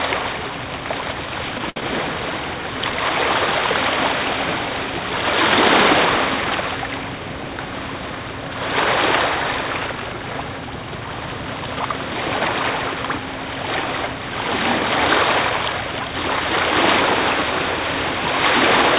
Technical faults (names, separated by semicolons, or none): short stall from a late packet